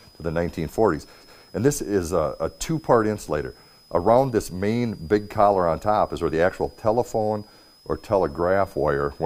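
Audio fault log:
throughout, switching supply whistle: a thin, high whistle sits under the sound for the whole clip, wandering between about 4.83 and 5.19 kHz, centred near 5 kHz and roughly 35 dB below the programme. A switching power supply is cycling at an audible rate, either in a light-load burst mode or beating against another supply. Its ripple leaks into the audio path as a tone, and the shifting switching rate makes the pitch wander.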